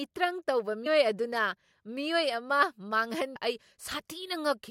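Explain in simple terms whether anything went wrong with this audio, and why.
Two brief glitches, at 0.85 s and 3.35 s, come from damaged data in a compressed stream: corrupted bytes made the decoder misread frames and resynchronise.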